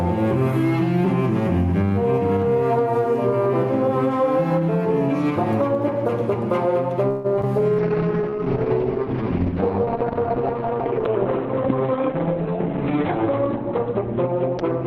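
Gain pumping runs through the whole clip. The level swings by roughly 10 dB. Quieter passages and the background in the gaps rise, then duck under each loud sound. Loud and soft parts sit closer together than they should, and the sound is squashed. The likely cause is gain set far too high at the microphone, with a fast limiter or compressor pulling it back down on every loud moment.

At 7.09 s a call audio freeze begins and lasts until 7.26 s. The last sound is held and drawn out for about 150 ms as a fading buzz or hiss. It never drops to silence. Then the audio resumes where it stopped. Nothing is lost, but about 150 ms of extra delay has been inserted. The likely cause is packets held up in transit while the jitter buffer ran dry.

Right after come two short concealed packet losses, at 7.36 to 7.39 s and 7.41 to 7.45 s. In each, 40 ms of audio never reached the decoder. The receiver bridged the hole with 10 ms and 16 ms of continued sound, then blended back in. 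Each one is a brief smear or wobble. Because less was filled than was lost, the delay shrinks again by a few tens of milliseconds.

From 7.59 to 8.71 s a jitter buffer slow-down follows. The receiver was rebuilding its reserve. It repeated single pitch periods or fragments of pauses many times over, adding 55 ms in total. Playback runs at 96% speed while the pitch stays the same. Sounds in this stretch are drawn out.

At 7.8 s a call bitrate drop sets in and lasts to the end of the clip. The encoder went from 64 kbps down to 7 kbps. It stayed at that floor for about 5.5 s. The bandwidth falls from 20 kHz to 4 kHz, so the top end is cut away. The sound turns muffled and coarser, and it does not clear before the clip ends. This follows a fall in the call's bandwidth estimate.

Two jitter buffer speed-ups come inside that degraded stretch. The first runs from 11.65 to 12.04 s at 109% speed. 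The second runs from 12.50 to 13.24 s at 104%. Each removes roughly 40 ms. The receiver was holding more audio than its target. It trimmed short pieces of one or a few pitch periods, many times in a row. Pitch is unchanged. The first stretch sounds hurried. The second is a milder push forward.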